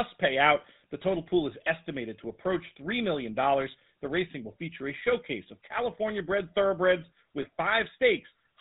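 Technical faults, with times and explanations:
Throughout: GSM full-rate codec. Speech is rendered buzzy and gravelly, consistent with a 13 kbps coder driving a vocal-tract model with sparse pulses, with nothing above 4 kHz.
7.42 to 7.46 s: lost GSM frames. For about 20 ms the sound holds as a brief rough, metallic ring, fitting one lost frame concealed by repeating the previous frame's settings.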